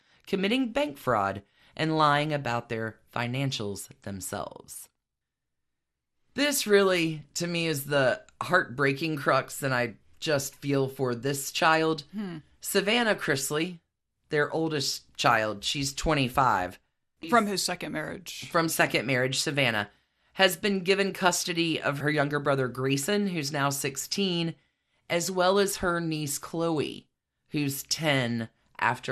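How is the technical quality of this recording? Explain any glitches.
The quality's noticeably compromised: the speech runs dull and grainy from start to finish, with a watery, gurgling edge on top. That's most likely MP2 compression, MPEG Layer II coding starved of bits, which fits a rate around 80 kbps. The encoder carves the spectrum into narrow slices and rations bits between them, so the upper slices keep dropping in and out and the rest get quantised roughly. That's where the muffled top end and the bubbly texture come from.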